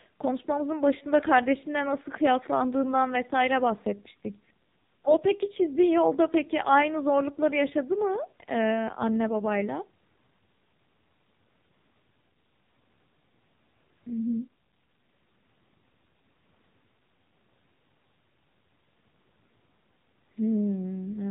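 Throughout, the speech has passed through the AMR narrowband mobile codec at a heavy compression setting, which points to one of its lowest modes, around 6 kbps. Nothing above 3.8 kHz survives, and the voice comes out buzzy, thin and distinctly synthetic.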